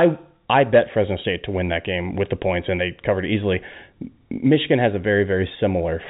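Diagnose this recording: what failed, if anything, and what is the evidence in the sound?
Nothing has failed: the speech comes through a G.711 mu-law telephone path at 64 kbps, limited to the band below 4 kHz as that format requires, with at most a faint level-following quantisation noise from the coding.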